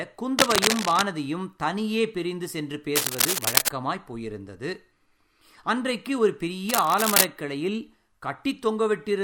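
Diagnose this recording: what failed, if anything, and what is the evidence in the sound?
Scratchy, rustling bursts roughly as loud as the speech at 0.39–1.03 s, 2.95–3.69 s and 6.69–7.26 s: cable scratch noise, likely a worn analogue connector's contact resistance fluctuating.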